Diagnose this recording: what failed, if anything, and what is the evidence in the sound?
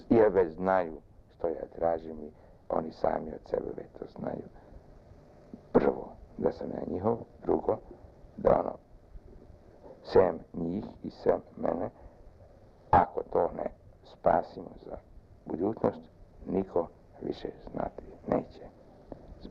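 Clock drift between sender and receiver failed at the network and jitter-buffer stage. The sender's clock runs fast by roughly 4 percent. Audio arrives faster than the receiver plays it, so the buffer keeps filling. Small timing hiccups recur all through the clip at uneven intervals.

Repeated timing corrections run from 0.23 s to 19.36 s. To stop the buffer overflowing, the receiver keeps cutting out short pieces, all in the same direction. The effective pace is 104 percent. The cuts are unevenly spaced and small.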